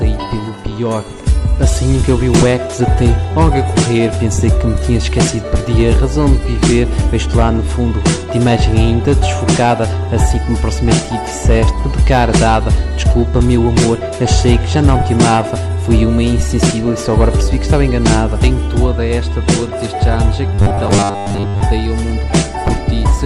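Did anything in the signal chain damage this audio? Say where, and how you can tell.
Yes. From 20.55 to 21.63 s the sound turns into a rigid, metallic buzz fixed at 100 Hz: robotic sound from repeated short buffers. This likely comes from the driver or buffer stage, where late data left gaps. Most of that stretch was filled by looping the last 10 ms chunk while the real audio was skipped.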